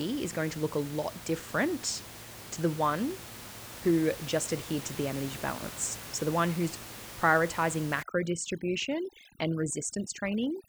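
From 8.03 s, right after "the one who's prioritizing", and continuing to the end at 10.68 s, the background in the pauses drops and breaks up into twinkling specks. This is overdone noise removal. A noise reducer set too aggressively is cutting individual frequency bands whenever they sit close to its noise estimate. That strips out the room noise, which sits only about 14 dB below the speech, and the quieter parts of the voice along with it.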